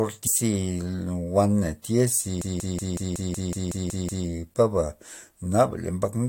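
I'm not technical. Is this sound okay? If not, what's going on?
No. From 0.26 to 0.28 s there is damaged data in a compressed stream: a brief glitch where the decoder lost its place.

From 2.42 to 4.27 s a system hang loop repeats the same 186 ms of speech ten times, a machine-gun stutter consistent with an 8192-sample buffer cycling while the computer froze.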